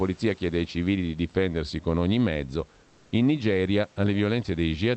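Speech, with comfort noise in place of the background from 2.83 to 3.11 s, right after "difendersi con ogni mezzo". For about 280 ms, the room's real background, which sits roughly 36 dB below the loud passages, gives way to a steady, featureless hiss about 2 dB different in level. This is likely Opus discontinuous transmission filling the pause with synthetic noise. Unlike a dropout or noise gate, the gap never falls silent; only the background's texture goes flat.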